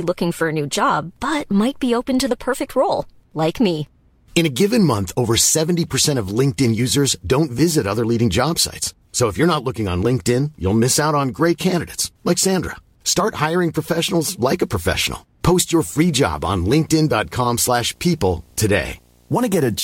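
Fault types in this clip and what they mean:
Corrupt frame decoded: damaged compressed frames were played anyway, so misread gains and codes put energy at wrong frequencies. A faint blip at 5.89 s, a few frames' worth and far below the speech, then a loud burst from 7.08 to 7.12 s, close to full scale.
Video or display buzz: a screen or video cable couples into the audio path. From 15.87 s to the end a 60 Hz buzz with hash above it sits about 35 dB under the speech, which fits interference locked to a 60 Hz picture field rate.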